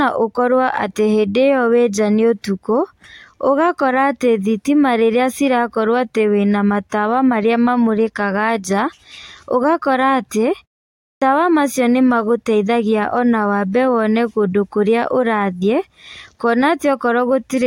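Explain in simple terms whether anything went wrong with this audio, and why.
Something did go wrong, at about 10.97 s, just after "ũgakora atĩ". This is a clipped start after a pause. The speech stops for about 0.39 s, and in that gap the playback device goes idle. When the speech resumes, the device needs time to wake up again, so the first quarter of a second (about 0.25 s, ending near 11.22 s) is swallowed. The next word therefore starts abruptly, with its opening sounds missing.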